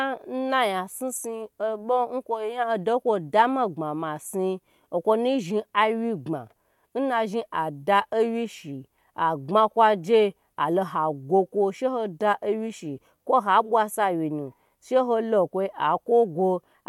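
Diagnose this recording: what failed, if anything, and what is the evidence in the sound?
Nothing failed; no stage shows any audible problem.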